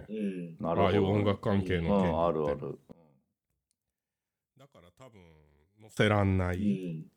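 From 2.92 s to 5.97 s, one channel inverted is the likely cause: with one side of the stereo pair flipped in polarity, the shared centre content cancels when the channels combine, so the speech falls by about 26 dB to a faint residue.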